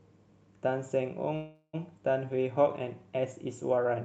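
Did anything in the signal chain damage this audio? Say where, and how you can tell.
Yes. A call audio freeze runs from 1.35 to 1.75 s. For about 380 ms the sound is replaced by a fading buzz carried on from the last moment before it, ending in roughly 40 ms of silence. The speech then resumes exactly where it stopped, with nothing lost but everything afterwards shifted about 0.38 s later. The likely cause is a network stall at the jitter buffer: packets arrived late, the buffer ran dry, and the receiver stretched out the last sound until delivery resumed.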